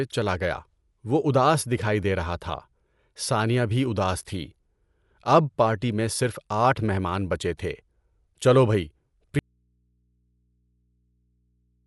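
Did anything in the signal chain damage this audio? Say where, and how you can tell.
Yes. Dolby Digital compression runs through the whole speech clip, at the codec stage. Nothing reaches above 11.5 kHz, so the speech sounds dull, and plainly audible roughness and fluttering noise sit around voiced sounds. The encoder likely ran short of bits, which fits a rate near 64 kbps. It cut the band and left many frequency lines without mantissa data, and the decoder filled those lines with dither noise.

An audio dropout to a faint residue begins at 9.39 s and lasts to the end. The speech stops abruptly rather than fading, and only mains hum remains, roughly 45 dB below the earlier level. Hum in place of silence shows that everything downstream stayed live while the source went missing. The likely cause is a break in the analogue wiring or input connection, which left an open input picking up hum.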